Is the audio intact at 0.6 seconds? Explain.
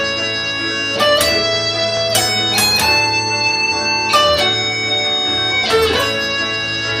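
Yes, the audio at 0.6 seconds is intact, with no dropout, click, distortion or other fault at that moment.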